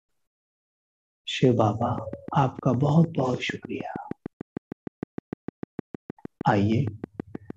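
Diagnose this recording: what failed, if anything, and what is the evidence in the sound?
A train of clicks runs from 1.82 s to 7.51 s: some forty near-identical pulses at a regular 6.5 per second, peaking about 10 dB above the programme and audible in pauses too. The cause is likely electrical interference coupling into the analogue wiring or interface.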